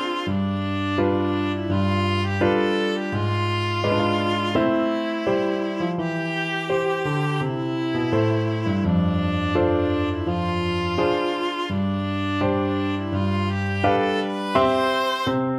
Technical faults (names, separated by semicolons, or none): none